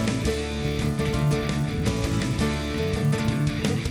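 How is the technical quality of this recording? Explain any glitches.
The technical quality is compromised by one fault that runs through the whole clip. A resampler restarted on every block is present throughout. The signal was converted block by block from 24 kHz to 48 kHz. Each 10 ms block was processed alone. At every edge the converter lacked the true neighbouring samples, so a small error lands there. At 100 per second these ticks merge into a buzz at 100 Hz. The buzz follows the sound and drops away when it stops.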